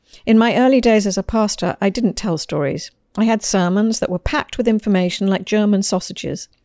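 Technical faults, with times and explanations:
No technical faults can be heard anywhere in the recording.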